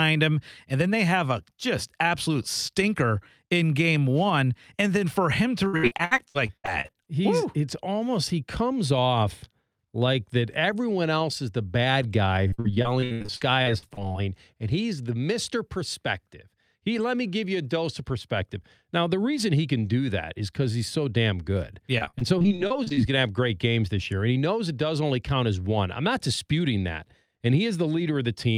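Repeated packet loss (robotic sound) hits the speech three times: 5.67–7.08 s, 12.48–14.16 s and 21.98–22.99 s. In each stretch, lost or late packets leave a rapid run of holes, each patched by stretching the last good sound, so 27–36% of the span is concealed. The result is choppy speech with chunks missing. The gaps run up to about 75–78 ms in the first two bursts and only 30 ms in the last.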